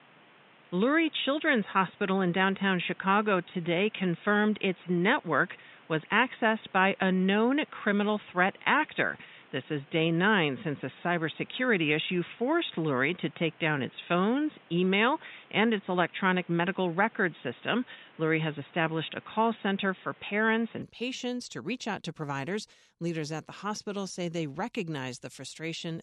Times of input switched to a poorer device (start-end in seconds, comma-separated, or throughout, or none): 0.00-20.82